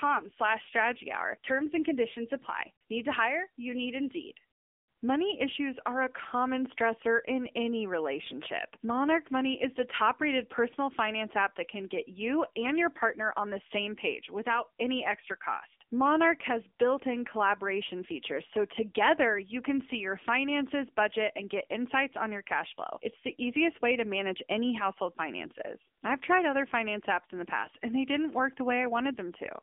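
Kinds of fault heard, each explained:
AMR narrowband mobile codec, throughout: the speech is squeezed into a 250 Hz to 3.5 kHz telephone band, with nothing above 3.6 kHz. It is then rebuilt from a vocal-tract model fed sparse pulses, leaving a plainly buzzy, synthetic edge that fits a low 7.95 kbps mode.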